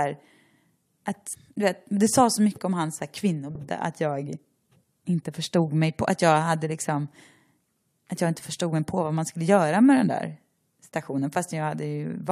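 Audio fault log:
1.34 s and 3.54 s, damaged data in a compressed stream: a brief glitch just before "du vet det sa", then another between "mycket om hans här" and "att jag". Corrupted bytes made the decoder misread frames and lose sync while it hunted for the next valid frame header.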